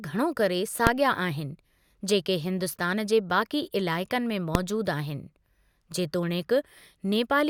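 At 0.87 s and 4.55 s, invalid numbers at full scale: non-finite values pinned the output to maximum for about 1.33 ms, likely a 64-sample block, heard as single sharp bangs.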